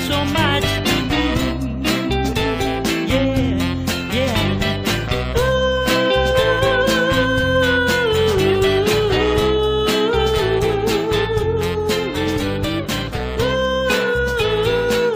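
No audible technical faults.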